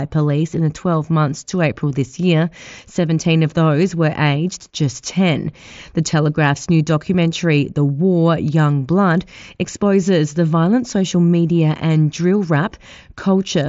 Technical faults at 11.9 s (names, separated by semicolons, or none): none